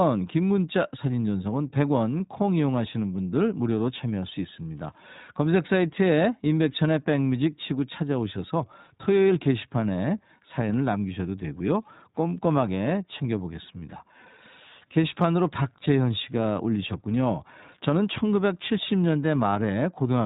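From start to finish the speech is carried through the iLBC codec, and the damage is plainly audible. Nothing above 3.8 kHz survives, and the speech takes on a slightly rough, synthetic grain. A simple low-pass filter would cut the top band but leave that grain out. The codec works in 20 ms frames coded independently, and the bitrate suggests the 15.2 kbps mode.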